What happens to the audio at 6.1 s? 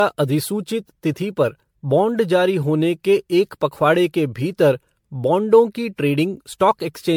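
At 6.1 s you're hearing generation loss, and it isn't just that moment: it runs through the whole speech clip. The likely cause is the audio being decoded and re-encoded about ten times, which fits an MP3 chain at around 96 kbit/s. Each pass requantises on a shifted frame grid, so noise and spectral gaps pile up. That's why it sounds swirly, hollow and smeared, with soft attacks, and nothing above about 19.9 kHz.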